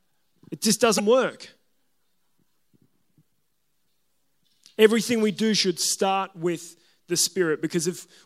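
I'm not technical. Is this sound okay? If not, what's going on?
No. At 0.96 to 1.00 s the speech breaks into a brief glitch from damaged data in a compressed stream: the player hit garbled bytes and decoded nonsense until it found valid data again.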